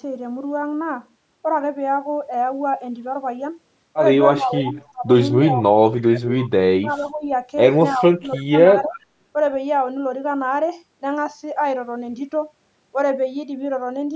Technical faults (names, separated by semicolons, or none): speech suppressed in double talk; echo leak